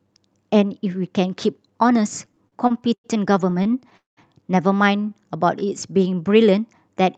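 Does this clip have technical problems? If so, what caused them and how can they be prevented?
Yes. Repeated stalls (stutter) occur from 2.25 to 3.06 s, with eight short gaps of up to 0.10 s, and again from 3.50 to 4.19 s, with seven gaps of up to 0.20 s, covering 39% of that span. Packets arrived late, so the jitter buffer kept running empty. The receiver stretched the last sound through each wait and faded it in the longer ones. Nothing is lost, but the speech drags and stutters. A steadier network path, or a larger jitter buffer target, would prevent this.

A jitter buffer slow-down follows from 4.97 to 6.30 s. To rebuild its reserve, the receiver repeated single pitch periods and pause fragments, adding 0.14 s and playing at 90% speed at unchanged pitch, so sounds are drawn out. Keeping the buffer from draining, by reducing delay variation upstream, would avoid it.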